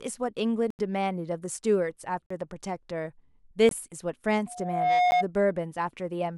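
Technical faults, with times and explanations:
0.70 to 5.11 s, blocks of digital silence: the output buffer was likely not filled in time, so runs of zeros replaced the speech at 0.70 to 0.79 s (85 ms), 2.26 to 2.30 s (43 ms), 3.69 to 3.71 s (21 ms) and 5.11 s (12 ms). The first three lengths halve each time, which fits blocks of 4096, 2048 and 1024 samples. Each cut is abrupt, so the sound has short holes that shrink to a tick.
4.46 to 5.26 s, loudspeaker feedback squeal: the microphone picked up the loudspeaker it was feeding. At 718 Hz the loop's gain rose above one, so that single tone reinforced itself, swelling over about half a second to roughly 5 dB above the speech before it stopped.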